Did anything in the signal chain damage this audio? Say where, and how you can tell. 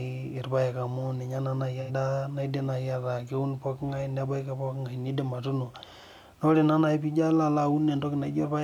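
Yes. Just after "naa naaji", from 1.81 to 1.91 s, the speech smears into a brief noisy, phasey patch. That points to AAC frame loss with concealment in the codec stage: about 85 ms, consistent with two lost frames, was rebuilt from the last good spectrum.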